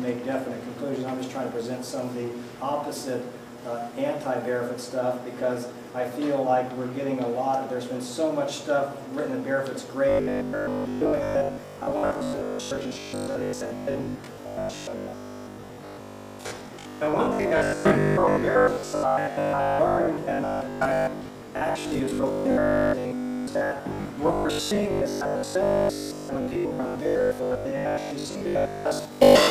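From 10.09 s to 29.49 s the audio turns into robotic sound from repeated short buffers: a rigid, metallic buzz with a fixed pitch of 50 Hz imposed on the sound, which still loosely tracks its original shape. The cause is likely a starved playback path repeating the last 20 ms of audio whenever new data fails to arrive, skipping the real material in between. This happens for roughly 70% of that stretch, giving the steady mechanical drone.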